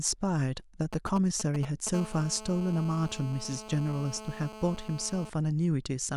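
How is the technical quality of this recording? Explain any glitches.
The recording is compromised by interference from a 2G mobile phone close to the recording chain, in two distinct phases.

From 0.93 to 1.89 s there are GSM signalling bursts. A nearby handset is transmitting short clusters of radio bursts, the pattern a phone produces while negotiating with the network before a call or message. The audio input demodulates these RF pulses, so a galloping run of ticks and brief 217 Hz buzzes sits under the speech, roughly 10 dB below it.

From 1.94 to 5.30 s the interference settles into a continuous GSM phone buzz, consistent with the handset now being in an active call. Its transmitter pulses at about 217 Hz without interruption, and rectification in the audio circuitry turns each pulse into a sharp-edged click. The result is a hard, raspy 217 Hz tone rich in harmonics, unrelated to the speech, running steadily at about 15 dB below the signal until it stops.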